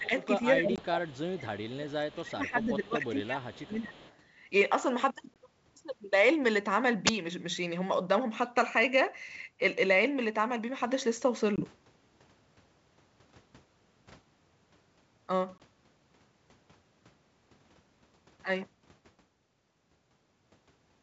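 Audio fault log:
0.00–0.13 s, 0.54–1.39 s and 1.74–3.98 s, speech suppressed in double talk: the echo canceller likely could not separate the near talker from loudspeaker echo while both sides spoke, so it turned everything down. The speech dips by up to about 20 dB, longest across the 1.74–3.98 s stretch.
0.04–0.26 s, 0.65–1.70 s and 3.70–4.16 s, echo leak: the far end's echo canceller likely left part of its loudspeaker pickup in the return path. A faint copy of the speech trails 239 ms behind, roughly 20 to 30 dB under the direct sound and loudest in the 0.65–1.70 s span.
0.76–0.82 s, 5.34–5.38 s, 11.56–11.61 s and 15.58–15.60 s, packet loss on an ADPCM call: each time 20 ms of audio went missing and was filled with silence. The receiving decoder's predictor and step size then fell out of step with the sender's, so each hard-edged gap is followed by briefly, slightly distorted speech before it settles.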